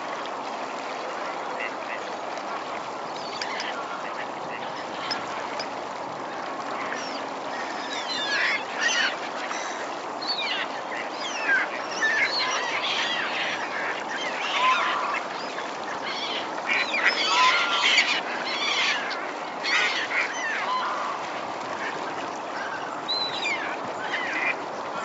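No technical faults can be heard in this recording of sounds, which has passed through a call's microphone processing and WebRTC call path and carries nothing above 8 kHz, as that path's bandwidth allows.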